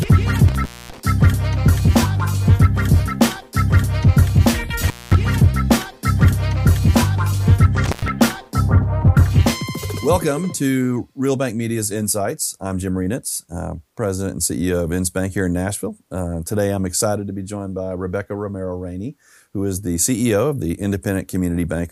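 The sound drops out three times, at 0.48–1.00 s, 4.87–5.15 s and 7.85–8.08 s, with crackle at each edge and faint hiss during gaps of 0.24, 0.22 and 0.11 s. This is intermittent contact: a loose cable or plug briefly opening the signal path.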